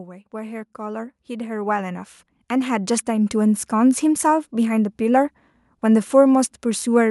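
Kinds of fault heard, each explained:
Automatic gain rising: the gain control judged the input too quiet and kept turning it up, so voice and background noise swell together by about 13 dB from 0.3 to 3.7 s. The waveform envelope widens steadily, and the spectrogram brightens evenly across all frequencies, noise floor included.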